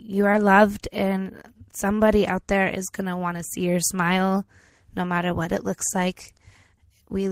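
Right near the start, at about 0.32 to 0.34 s, there's a short concealed packet loss. Around 10 ms of the call arrived too late, so the receiver stretched the preceding sound over the gap and blended back in, leaving a quick smear or wobble.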